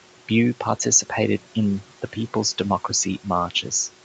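From start to finish, a noise suppressor is working frame by frame on the speech, pulling down every band it judges to be steady background by about 12 dB. These are noise suppressor artifacts: the room noise, which sits about 19 dB below the speech, sinks in the gaps between phrases and swells back up underneath the talking, so the noise pumps along with the voice. The speech is heard within a band that stops at 8 kHz.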